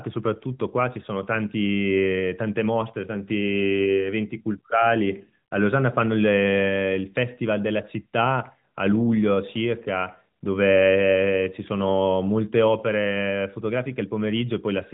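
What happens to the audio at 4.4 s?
At 4.4 s the speech plays through intact, with no dropout, glitch or other fault, only the steady band-limited character of a narrowband mobile channel.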